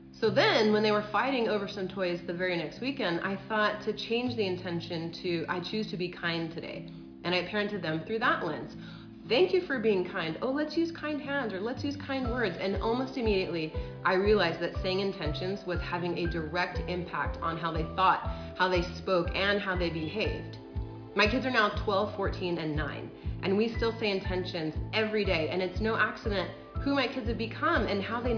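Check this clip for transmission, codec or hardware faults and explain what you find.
No faults found; nothing in the clip points to a problem in the signal path.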